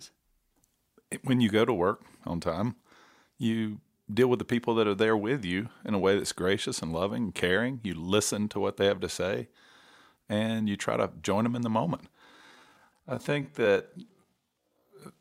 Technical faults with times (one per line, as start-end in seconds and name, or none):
12.21-15.21 time-stretched section